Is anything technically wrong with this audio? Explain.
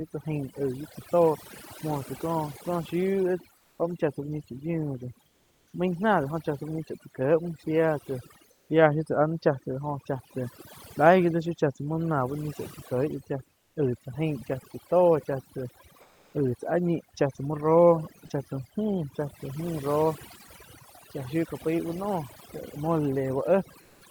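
Yes. Overdone noise removal runs through the whole recording. Quiet frequency bands near the noise estimate are pushed down or removed entirely, taking low-level parts of the speech with them. The background drops and breaks up into twinkling specks.

Comfort noise in place of the background appears at 3.57–3.79 s (just before "muo chá tsá uh"), 5.27–5.73 s, 8.51–8.69 s, 13.59–13.75 s, 16.01–16.33 s and 23.81–24.01 s. The real room tone gives way to steady, featureless synthetic noise, mostly about 2 to 4 dB quieter, likely from Opus DTX filling pauses when transmission stops.

Sound dropped by the voice detector occurs at 18.27–18.29 s. About 10 ms of sound is lost and briefly replaced by comfort noise before the sound returns. The likely cause is the DTX voice detector treating that moment as background and halting transmission.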